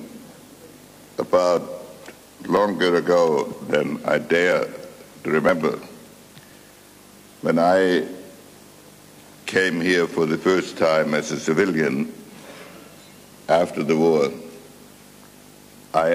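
At 0.61–0.64, 1.57–1.59, 2.57–2.60, 3.53, 4.52–4.56, 5.49–5.52 and 7.46 s, overlap between stream segments removes between roughly 14 and 40 ms of sound at each 1 s segment boundary. Overlapping time stamps made the player trim audio that was never duplicated, so each spot is a small click or skip. A waveform shows an abrupt discontinuity, and a spectrogram shows a thin vertical broadband line.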